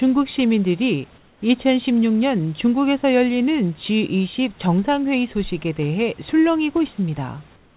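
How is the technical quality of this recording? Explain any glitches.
The recording is speech over a narrowband call link, with nothing audible above 4 kHz, which fits G.711 telephony, and a room-noise floor about 32 dB below the speech. Two pauses have their background replaced.

Comfort noise in place of the background, 1.18–1.42 s and 7.56 s to the end: during these silences the real room sound gives way to a smooth, featureless hiss, about 4–5 dB quieter. The likely cause is discontinuous transmission, with the sender going quiet when no speech is detected and the receiver synthesising roughly matched noise to fill the gap.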